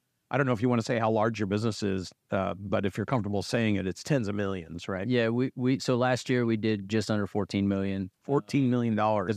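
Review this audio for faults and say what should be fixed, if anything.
Nothing needs fixing: the speech signal shows no technical faults anywhere in the recording.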